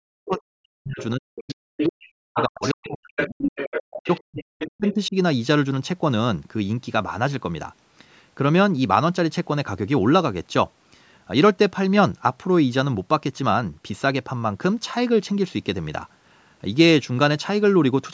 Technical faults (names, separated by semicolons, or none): speech suppressed in double talk; other side's voice leaking through